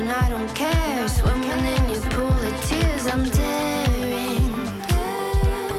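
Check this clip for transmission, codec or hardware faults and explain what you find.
One fault is present. From 0.87 to 3.47 s there is a doubled audio track: a second, full-band copy trails about a second behind, a few dB quieter, likely from a slower capture path mixing in. Unlike room echo, it never decays and starts and stops abruptly.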